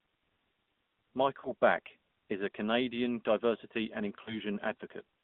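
Thin, buzzy, band-limited speech runs through the whole clip, with nothing below about 150 Hz or above 3.6 kHz, and the voice has a plainly audible synthetic edge. That is the AMR narrowband mobile codec: 8 kHz sampling and a coarse pulse-driven vocal-tract model, at a coding rate the sound suggests is about 10 kbps. Brief dips or warbles occur at 1.40 to 1.52 s, which fits two lost 20 ms frames, and at 4.24 to 4.39 s, just after "diversity and", which fits one. These are lost AMR speech frames: the decoder filled each gap by repeating the last good pitch and filter settings at reduced gain.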